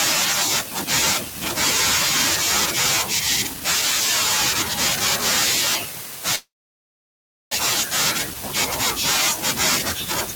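A call audio freeze runs from 6.35 to 7.53 s: the last sound trails off into about 1.02 s of silence, then the speech resumes exactly where it stopped, nothing lost, just 1.16 s later. Packets were likely delayed in transit, draining the jitter buffer.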